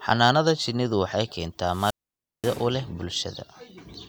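Wireless microphone squelch dropout in this speech clip from 1.64 to 2.70 s: the FM radio link fades, hiss rises, then the receiver's squelch mutes output for about 534 ms before speech returns.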